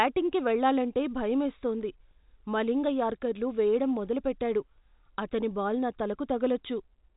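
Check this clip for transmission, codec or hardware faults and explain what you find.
No transmission, codec or hardware fault can be heard in this speech. The G.711 telephone coding is working as intended, with the sound band-limited so that nothing passes above about 3.8 kHz, the narrow bandwidth expected of a standard 64 kbps telephone line.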